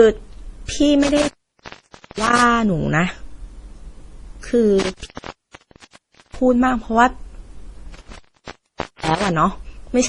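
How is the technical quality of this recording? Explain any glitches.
The recording is degraded throughout and has three clear dropouts.

From start to end, nothing is heard above 10.4 kHz, and smeared, swirly codec artefacts are layered together. The likely cause is transcoding between lossy codecs: a low-bitrate MP3 re-encoded to Opus.

Intermittent contact breaks the speech three times: from 1.03 to 2.43 s, 4.80 to 6.39 s, and 7.94 to 9.28 s. A loose connection opens for about 0.90 s, 1.29 s and 0.85 s. Crackle marks each edge, with faint hiss in between.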